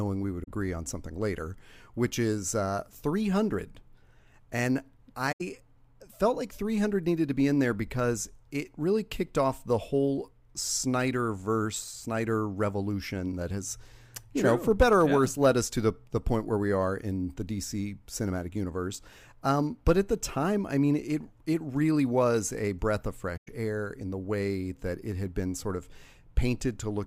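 AAC frame loss with muting opens soft-edged holes at 0.43 s (after "we would"), 5.32 s and 23.37 s (after "was a breath of"). The decoder zeroed the missing spectra, so the overlapping windows fade out and back in, unlike a hard dropout.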